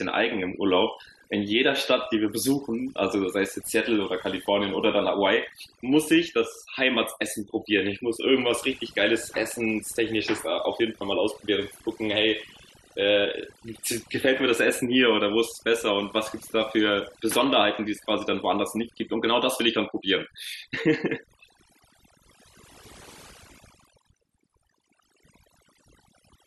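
Speech runs through overdone noise removal from start to finish. A noise reduction stage set far too aggressively is pulling individual frequency bands down or out whenever they sit close to its noise estimate, so the quieter components of the voice vanish along with the noise. Between phrases the background drops and breaks up into twinkling specks. Unlike a noise gate, which mutes everything at once, this removes parts of the voice band by band even while it is speaking.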